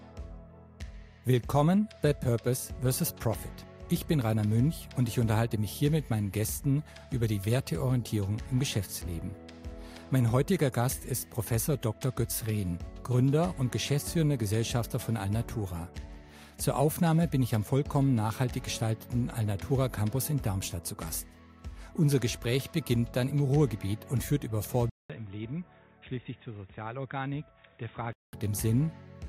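At 24.90 s the sound drops out for 200 ms, then returns dull and boxy, roughly ten decibels quieter, with nothing above 3.8 kHz and a faint new noise floor, until 28.33 s. The likely cause is the input switching to a poorer device in mid-recording.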